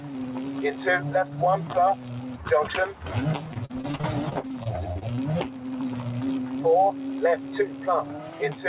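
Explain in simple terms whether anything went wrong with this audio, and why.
A noise suppressor applied to music or sounds runs throughout: a filter built for speech treats steady tones and fading tails as noise, so the level keeps swelling and sinking.

Sound cut by the noise suppressor occurs at 0.0 to 0.15 s, 2.25 to 2.4 s, 7.37 to 7.52 s and 7.68 to 7.87 s. Each time, a brief stretch is judged to be noise and pulled down.

Repeated packet loss (robotic sound) runs from 3.48 to 5.19 s. Pieces of audio kept going missing, each up to about 40 ms. The gaps were patched by stretching the previous sound, which makes it choppy.

The call path's narrow top end, with nothing above 4 kHz, also makes the audio sound dull.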